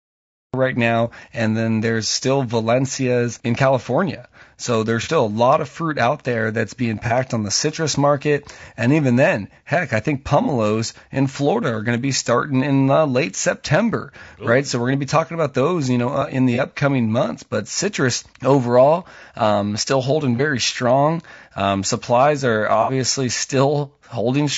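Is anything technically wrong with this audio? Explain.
Yes, there are three problems in this speech clip.

Throughout, the voice is rough and grainy, with noise filling the gaps between harmonics and a thin, synthetic-sounding top band. The likely cause is low-delay AAC compression (AAC-ELD), whose short frames resolve pitch poorly; the damage fits a bitrate around 32 kbps. Unlike general band-limiting, the grit sits inside the voice itself.

The file has a cut-off start. It holds digital silence until 0.54 s, then the speech begins abruptly mid-sound with no attack or fade. The capture or stream started late. A true quiet lead-in would carry room noise and begin cleanly.

There is AAC frame loss with concealment at 5.03 s, at 7.07 s (between "out there that's being" and "on the citrus market"), at 10.43 s, at 16.55 s (between "you know uh in" and "upcoming months"), at 20.36 s, and at 22.82 s just after "supplies are". 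The decoder patched each missing stretch from the last good spectrum. Each of the first five gaps is about 30 ms long, fitting one lost frame. The last is about 60 ms, fitting two frames. Each sounds like a brief smeared, phasey blur rather than a hard dropout or click.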